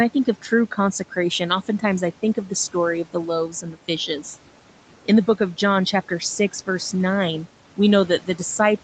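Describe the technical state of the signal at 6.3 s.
At 6.3 s the speech is intact, with no fault at that moment, just the normal call processing, band-limited at 8 kHz, and room noise sitting about 20 dB below the speech.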